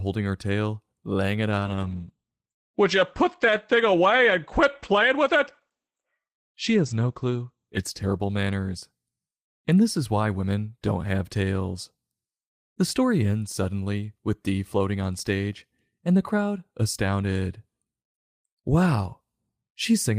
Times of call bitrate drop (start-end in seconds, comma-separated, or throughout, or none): 1.61-9.01